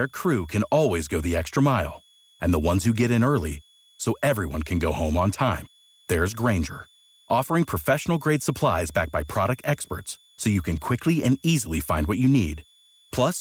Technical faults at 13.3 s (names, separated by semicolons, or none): switching supply whistle